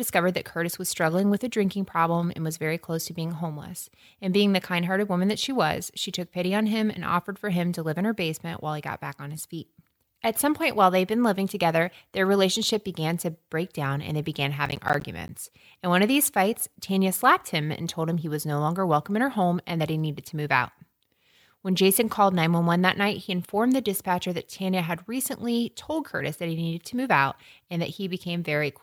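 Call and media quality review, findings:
Processor overload crackle, 14.66 to 15.29 s, just after "down and they began". A burst of gritty crackle over about 0.63 s. Likely component: audio processing thread missing its deadlines under CPU load. About ten missed buffers, each left as a hard-edged gap of silence. The spacing fits buffers of roughly 10 ms. The crackle stops once the load clears.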